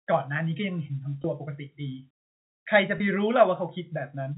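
At 1.22 to 1.24 s and again at 2.98 to 3.00 s, packet loss with pitch repetition briefly holds the last pitch period, giving a slightly buzzy sustain instead of the silent hole or click of a plain dropout.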